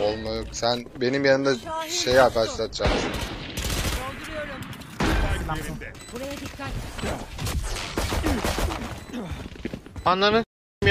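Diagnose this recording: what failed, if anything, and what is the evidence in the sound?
The failure sits at the network and codec stage: an adaptive stream at a lower bitrate. From 1.36 s to 3.36 s, quality drops abruptly with no gap. Nothing remains above about 14.9 kHz. At 3.36 s full quality returns just as suddenly. The connection slowed, so the player switched to a cheaper rendition for two seconds. The sound fits a step down from mid-rate AAC to a roughly 20 kbit/s HE-AAC stream, where treble is rebuilt rather than coded.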